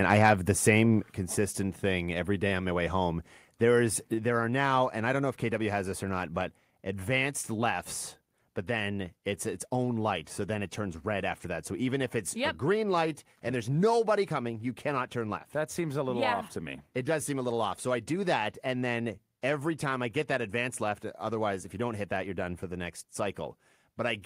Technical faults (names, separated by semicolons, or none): microphone volume stepped down